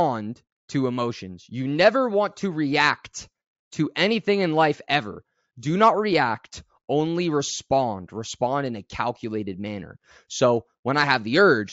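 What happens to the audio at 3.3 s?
Nothing goes wrong at 3.3 s; the speech carries on intact through that moment.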